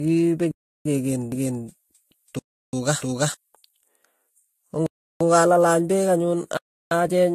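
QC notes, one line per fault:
Throughout: transcoding between lossy codecs. The speech carries two kinds of coding artefacts at once, heard together. The chain is likely an AAC-LC stage at 64 kbit/s followed by Vorbis at 37 kbit/s. The second encoder wastes bits re-encoding the first one's damage and adds its own. Nothing remains above 14 kHz, because the lowest cut-off in the chain sets the top of the band.
0.51–0.85 s, 2.39–2.73 s, 4.86–5.21 s, 6.57–6.91 s: block of digital silence. Each time the sound drops to silence for about 341 ms, then returns. There is no fade in or out, so every dropout is heard as a short hole. The identical length fits a 16384-sample block that was not filled in time.
1.32–3.34 s: doubled audio track. A second full-band copy of the speech runs roughly 300 ms behind the original. It is about as loud as the original. The copy sounds dry, with no decay or room colour, so it sounds like a second playback rather than an echo. 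It cuts in and out abruptly at both ends. The likely cause is a second capture through a slower path.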